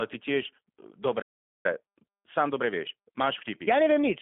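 Rough, slightly synthetic and band-limited from start to finish, the speech has nothing above 3.5 kHz and little below 250 Hz, the sound of the G.729 codec at 8 kbit/s rebuilding it from a vocal tract model and sparse pulses. At 1.21 s it abruptly goes silent for about 0.43 s, resuming at 1.66 s, likely a playback stall where the player ran short of data or was blocked. From 1.66 s to 4.12 s the speech runs hurried at unchanged pitch, about 1.15 times normal speed, which is time-compressed catch-up trimming and cross-fading small pieces to clear the backlog left by the stall.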